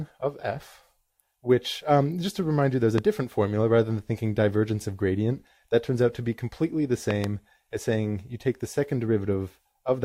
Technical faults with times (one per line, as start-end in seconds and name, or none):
2.98-3.00 loud pop
7.11-7.26 loud pop